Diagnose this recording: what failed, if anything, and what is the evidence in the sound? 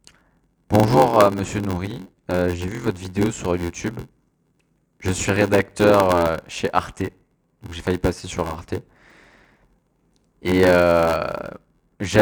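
A block size mismatch (padded) at the driver or buffer stage runs through the whole speech clip. A steady buzz at 86.1 Hz sits under the speech from start to finish, and delivery is slowed to 0.861 times normal speed while timbre stays intact. The upstream stage writes blocks shorter than the downstream stage reads, which fits a 512-sample read block, and the shortfall is zero-filled. Each block therefore carries a brief silent gap, producing the buzz and stretching the timing.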